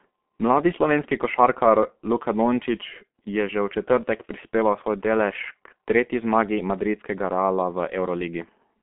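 G.723.1 codec damage runs throughout the speech: nothing above 3.7 kHz, a narrow 200 Hz to 3.4 kHz telephone band, and heavy muffled, hoarse coding consistent with roughly 6.3 kbit/s.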